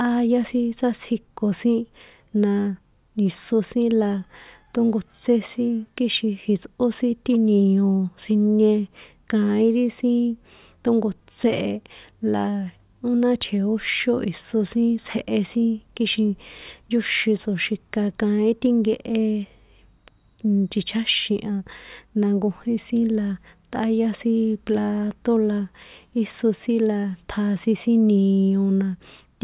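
No technical faults can be heard anywhere in this speech recording. Nothing in the signal calls for comment at any point.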